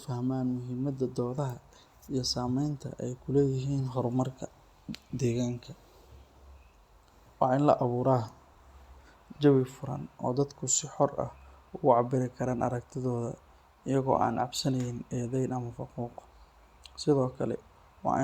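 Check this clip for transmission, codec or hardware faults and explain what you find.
Nothing here points to a transmission, codec or hardware problem; the speech comes through steady and intact the whole way, with nothing to flag.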